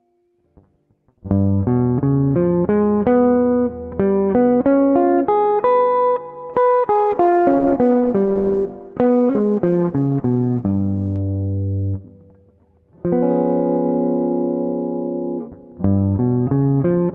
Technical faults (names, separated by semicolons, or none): call bitrate drop